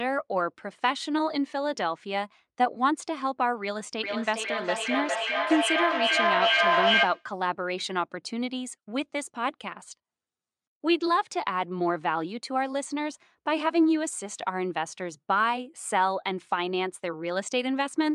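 From 4.03 to 7.33 s, feedback echo between two devices: speech loops back roughly every 0.4 s, repeats building to about 3 dB above the speech itself.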